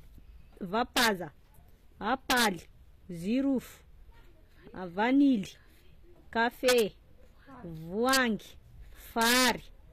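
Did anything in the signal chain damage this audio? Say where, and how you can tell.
Yes. The codec stage: the treble is synthetic and grainy, with nothing above 14.9 kHz, and the codec damage is plainly audible. That points to HE-AAC compression, likely at a low rate around 24 kbps, where spectral band replication copies lower bands upward, so s sounds turn gritty rather than simply dull.

A fixed-point gain or sample-format stage produces integer overflow at 0.97–1.07, 2.30–2.47, 6.69–6.80, 8.09–8.17 and 9.22–9.50 s, with peaks pushed about 2 to 3 dB past the limit. The samples wrap to the opposite sign rather than flattening, so these are cracks, sharper than clipping.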